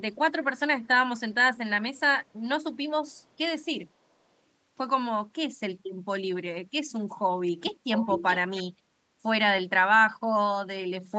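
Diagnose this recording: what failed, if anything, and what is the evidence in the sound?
Call processing failed with an echo leak, likely from a far-end echo canceller passing loudspeaker pickup back. From 1.95 to 2.0 s, a very faint copy of the speech returns 467 ms late. From 7.93 to 8.38 s, a much louder copy follows, 627 ms behind.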